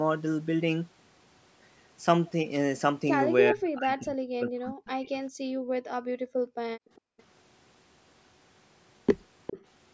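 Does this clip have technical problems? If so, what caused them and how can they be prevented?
Yes. From 3.52 to 5.19 s the speech is suppressed in double talk: the sound dips and breaks into pieces, falling by roughly 40 dB at worst, for about a second and a half in total. This is likely the echo canceller hearing both sides at once and turning everything down rather than separating its own talker from the loudspeaker echo. Unlike gating of the background, the speech itself is cut, not just the room sound between phrases. A headset, or a canceller with better double-talk detection, prevents it.

The background is gated by the echo canceller from 5.47 to 6.6 s and again from 6.78 to 7.18 s. The room tone drops away by about 40 dB and comes back when the canceller releases, so the pauses fall to near silence. What sets this apart from double-talk suppression is that the background disappears without the speech being chopped. 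Gentler suppression, or comfort noise to fill the gaps, keeps the background steady.

Echo leak appears in brief scraps at 6.96 to 7.01 s and 7.18 to 7.23 s, very faint at around 35 dB below the speech, then more strongly from 9.47 to 9.65 s, only about 10 dB down. Each is a copy delayed by 407 ms, likely from a loudspeaker whose echo canceller let part of the pickup through. The long, fixed delay marks it as returned echo rather than room reverberation, which would trail on immediately. Headphones on the far side, or better echo cancellation there, stop it.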